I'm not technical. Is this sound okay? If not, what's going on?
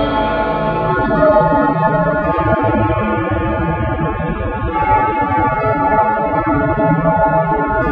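No, not quite. From about 0.89 seconds to the end, the music suddenly loses its sparkle: the high, crisp parts go dull or fizzy and artificial, and there's a smeary, watery quality. There's no silence or skip at the switch; the quality just drops. This is an adaptive stream at a lower bitrate. The player switched to a smaller, more heavily squeezed version of the music, most often because the connection slowed, and squeezing it that hard throws away detail.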